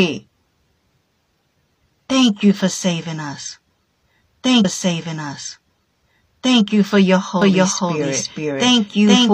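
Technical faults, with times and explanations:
4.60 to 6.60 s, stream segment repeated: about 2 s of speech plays over again, with a little blip at the jump back, just before "you for your".
7.42 s to the end, doubled audio track: right after "you for your" a second full-band copy comes in abruptly, about as loud and roughly half a second behind, likely from a slower capture path.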